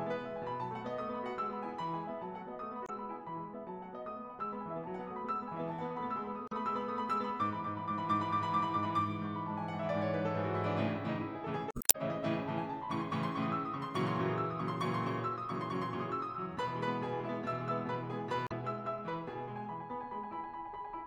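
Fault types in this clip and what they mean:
Damaged data in a compressed stream: corrupted bytes make the decoder misread frames and lose sync, so the music glitches briefly at 2.84, 6.46 and 18.44 s and for longer from 11.68 to 11.95 s.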